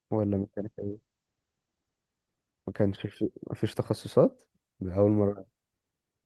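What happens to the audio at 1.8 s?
A call bitrate drop spans 0.59 s to 2.81 s, covering 1.8 s. The encoder's rate falls from 32 kbps to 12 kbps, bottoming out for 1.15 s, and the coded band narrows from 12 kHz to 8 kHz, leaving the speech coarse, watery and muffled.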